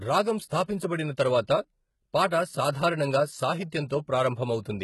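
A speech clip, likely HE-AAC compressed throughout at a very low rate, around 16 kbps, so the treble is rebuilt from copied lower bands rather than coded. The damage is heavy: s sounds turn gritty and metallic, and nothing remains above 11.8 kHz.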